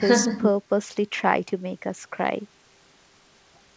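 No technical faults can be heard in the speech, which comes through a call path that carries nothing above 8 kHz.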